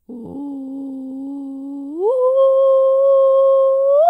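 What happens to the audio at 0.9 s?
Nothing goes wrong at 0.9 s; the music plays through that moment intact, with no dropout, click, distortion or other fault.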